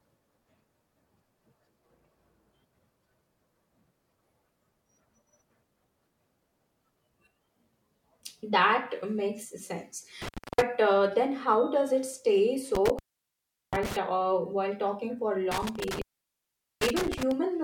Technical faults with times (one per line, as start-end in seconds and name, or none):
10.22-10.62 intermittent contact
12.75-13.96 intermittent contact
15.51-17.31 intermittent contact